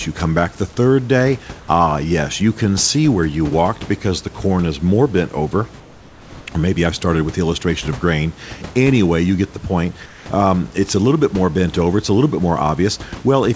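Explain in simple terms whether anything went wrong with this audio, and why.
At 1.60 s a tiny piece of the speech vanishes. For about 80 ms the sound gives way to an even hiss, and roughly 30 ms of real speech is missing before it returns. This is sound dropped by the voice detector. The sending side likely judged that moment to be background and briefly stopped sending. The receiving side filled the gap with generated noise until the detector picked the speech up again.

Two pauses also sound different from the rest. From 5.80 to 6.46 s, and again from 10.06 to 10.26 s, the room's natural background is replaced by a smooth, featureless noise. It is a little quieter than the real room sound, more noticeably so in the second pause. This is comfort noise in place of the background. During silences the sender likely stopped transmitting to save data, and the receiver made up a steady noise shaped roughly like the room. 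That is why the small details of the real background disappear until the talking resumes.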